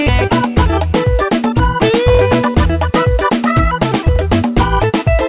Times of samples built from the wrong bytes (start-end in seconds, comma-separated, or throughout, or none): none